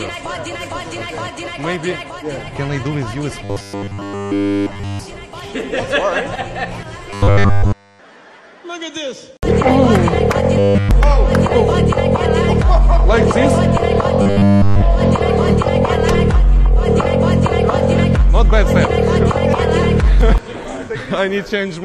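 From 3.45 to 5.00 s, 7.10 to 7.99 s, 10.59 to 10.91 s and 14.22 to 14.83 s, the sound becomes a rigid metallic buzz at 100 Hz, which is likely robotic sound from repeated short buffers. A roughly 10 ms segment loops in place of all the real audio. It differs from dropouts or stutter because it stays continuous with a fixed pitch.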